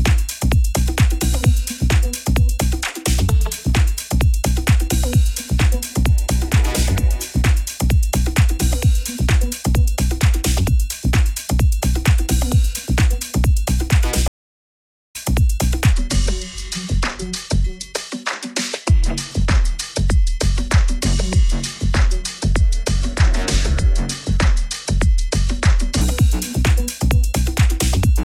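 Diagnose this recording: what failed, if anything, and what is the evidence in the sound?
Two stream reconnects in the network and playback stage. At 14.28 s the audio drops into 0.87 s of dead silence, then resumes roughly 0.7 s further on, so material is skipped. At 28.23 s a second gap of 0.49 s occurs, and the audio restarts 0.68 s earlier, repeating material. On a waveform each gap is a flat, near-silent line with an abrupt or briefly faded restart. On a spectrogram each is a blank vertical band where the fresh decoder picks up.

A section at the wrong speed runs from 15.93 s to 26.01 s. It plays at 0.751 times normal speed, so everything sounds slower and deeper, roughly five semitones low, with pitch and tempo dropping together at the boundaries. This is likely a resampling or clock mismatch in editing or playback. On a spectrogram the harmonic stack shifts downward and events stretch horizontally. 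On a waveform, transients spread out and periods lengthen by about a third.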